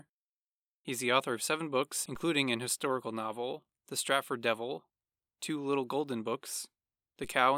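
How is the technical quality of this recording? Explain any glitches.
The recording has two DC steps, at 2.15 s and 7.24 s. Each time, the waveform's zero line jumps by about -40 dBFS and then drains away through a 5 Hz high-pass. Each jump is heard as a brief low thump under the speech, which carries on unchanged.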